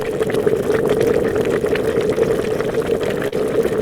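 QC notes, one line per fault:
Throughout, clock drift between sender and receiver: the sending clock runs around 4 percent slower, so the jitter buffer keeps draining and the receiver repeats short slivers of the everyday sound to keep pace, giving small timing hiccups at uneven intervals.
1.04–2.48 s, scattered short gaps: about seven tiny holes from lost or late packets, none longer than about 10 ms and around 50 ms in all, each patched by extending the preceding sound, so brief ticks or smears appear with nothing actually missing.
3.28–3.34 s, short stall from a late packet: a packet arrived 44 ms late, the buffer ran dry, and the receiver stretched the last sound for 44 ms before resuming from the same point, so a moment is held too long with a slight buzz or dip.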